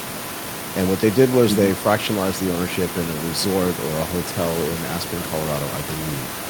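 Speech recording with no technical faults present.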